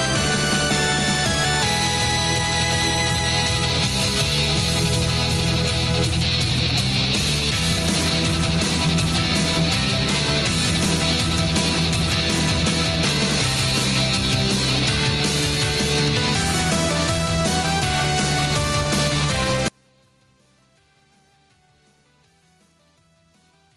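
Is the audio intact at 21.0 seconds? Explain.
No. At 21.0 s the audio sits inside an audio dropout to a faint residue that begins abruptly at 19.68 s and runs to the end. The wanted signal collapses to a faint leak roughly 40 dB below its normal level. The likely cause is a break upstream while the rest of the path stayed live. The sudden cut, rather than a gradual fade or a natural pause, and the faint residue instead of true silence, mark it as a dropout.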